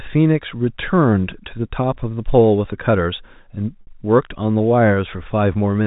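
Speech over a telephone-band channel, with one packet loss with pitch repetition from 3.81 to 3.87 s. About 60 ms of audio is missing, which fits two lost packets. The receiver bridged the hole by repeating the last pitch period and fading it, so the gap sounds like a brief held, buzzy tone. A plain dropout would leave silence or a click, and a buffer stutter would replay a longer, recognisable chunk. The narrow G.711 bandwidth itself is audible.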